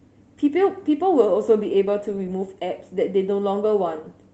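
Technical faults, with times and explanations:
No faults to report in this speech clip.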